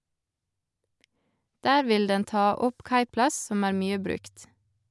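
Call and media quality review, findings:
Nothing stood out on listening to the speech in this clip.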